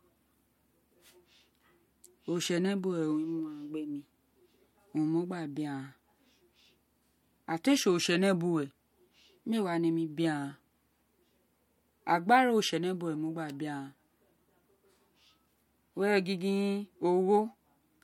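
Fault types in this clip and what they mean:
The speech signal shows no audible technical faults at any point.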